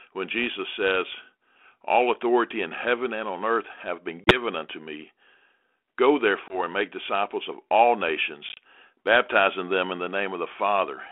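Hard-edged silent gaps, each followed by brief distortion or a level jump that settles within tens of milliseconds, come from packet loss on an ADPCM call. They fall at 4.24 to 4.41 s, between "on earth have been" and "unto me", with about 30 ms missing; at 6.48 to 6.62 s, just before "and make disciples of", with 20 ms missing; and at 8.49 to 8.58 s, between "make disciples of all" and "baptizing them in the", where 50 ms is lost in several holes over 80 ms, the longest 30 ms. Each time, the missing packets were filled with silence, and the receiving G.726 decoder's adaptive predictor and step size lost step with the sender's, so the sound resumes slightly distorted until the decoder catches up. The 32 kbit/s line band is audible as a 300 Hz to 3.4 kHz limit with light coding noise.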